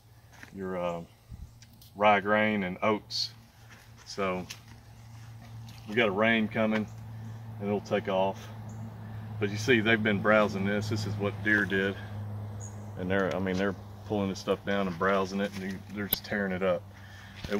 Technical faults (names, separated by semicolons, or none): damaged data in a compressed stream